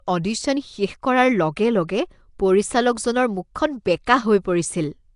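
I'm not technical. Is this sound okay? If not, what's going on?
No. The speech sounds rough and hissy throughout, with a smeared, underwater quality. Nothing above 10.6 kHz remains. The likely cause is Nellymoser compression, an old Flash microphone codec. It packs sound into tiny blocks and fills quieter parts with noise.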